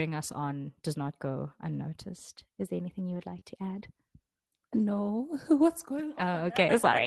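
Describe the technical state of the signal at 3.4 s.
Just after "there anything", from 3.07 to 3.37 s, the sound turns rougher and grainier. This is a lost packet rebuilt from error correction: several packets never arrived, and the decoder played the low-bitrate copies carried in the following packets instead, so there is no gap.

Right at 3.4 s, from 3.39 to 3.43 s before "to add", there is a brief smear or wobble. This is a short concealed packet loss: about 20 ms missed the decoder, and it extended the preceding sound to fill the hole before blending back into the real audio.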